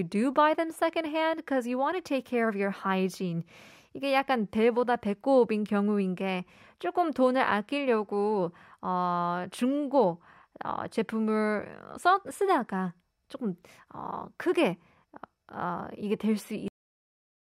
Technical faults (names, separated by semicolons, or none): cut-off end